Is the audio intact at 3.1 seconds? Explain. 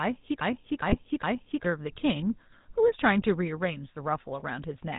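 No, the GSM full-rate codec runs through the whole speech clip, including 3.1 s. Its pulse-driven vocal model, likely at 13 kbps, leaves a buzzy, gravelly roughness with nothing above 4 kHz.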